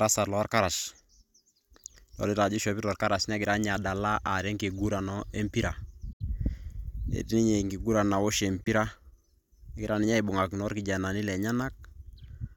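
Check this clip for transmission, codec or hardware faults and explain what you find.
Two brief silences cut into the speech, at 6.13 to 6.21 s and at 8.64 to 8.68 s. Each is a hole, with the speech picking up later as if it had continued underneath. This is likely a Bluetooth dropout: packets reached the headphones too late and were discarded. The gaps fit roughly three lost frames and then one.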